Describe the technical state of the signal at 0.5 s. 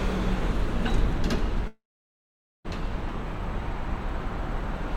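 At 0.5 s the signal is intact, with no dropout, distortion or other technical fault audible at that moment.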